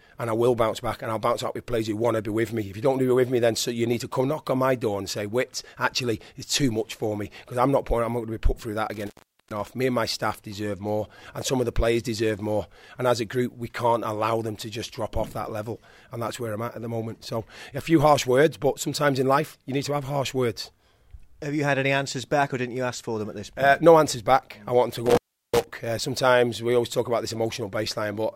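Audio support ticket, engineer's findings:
Dropouts with crackle at edges, 8.94–9.67 s and 25.06–25.64 s; line open about 410 ms and 360 ms. Intermittent contact: loose cable or plug momentarily breaking the signal path.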